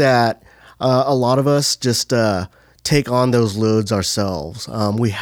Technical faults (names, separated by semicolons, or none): none